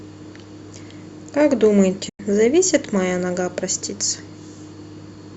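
From 2.09 to 2.20 s, a digital broadcast dropout: the receiver lost valid frames and muted, fading the speech within 8 ms into a 96 ms silence.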